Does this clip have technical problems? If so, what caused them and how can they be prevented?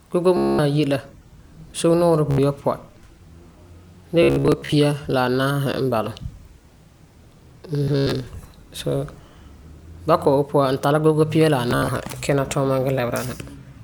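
Yes. The speech breaks into a buzzing, machine-gun stutter five times: at 0.37 to 0.59 s, just before "ayi la"; at 2.31 to 2.38 s; in scattered bursts from 4.23 to 4.72 s; at 7.83 to 8.13 s; and between "tari gogo pia la" and "kina tuuma" at 11.71 to 11.88 s. This is Bluetooth stutter. Radio packets arrived late or not at all, so the receiver kept replaying a short slice of its last buffer, then jumped ahead once data returned. Keeping the devices close, with a clear line of sight and away from Wi-Fi congestion, prevents it.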